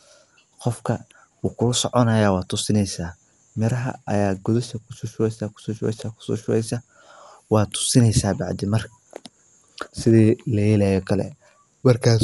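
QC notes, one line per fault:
Throughout, Dolby Digital compression: the speech sounds dull, with nothing above 11.4 kHz and a rough, fluttering noise around tonal parts. This is likely an AC-3 encoder starved of bits, consistent with roughly 64 kbps, narrowing the band and leaving many frequency lines unfunded, which the decoder fills with dither noise.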